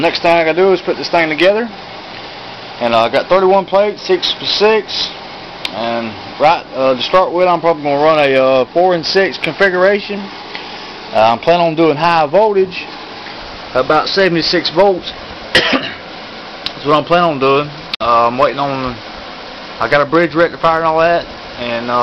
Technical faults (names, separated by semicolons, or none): digital broadcast dropout